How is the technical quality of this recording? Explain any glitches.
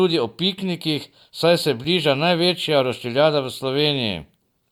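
The recording has one glitch, a gap between stream segments at 1.84 s, just after "o piknikih saj se". Two segments' timestamps fail to meet, and the player fills the missing 6 ms with silence, leaving a brief hard-edged hole. Unlike a packet dropout, no sound is lost; everything after the gap simply arrives slightly late.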